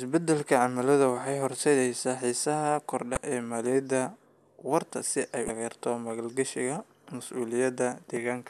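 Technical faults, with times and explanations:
3.14–3.17 s and 5.46–5.50 s, damaged data in a compressed stream: two short glitches, each about 34 ms, right before "ee maaliyadda" and right after "waarta si ay". Corrupted bytes threw the decoder off, so it garbled those frames while hunting for the next valid frame header.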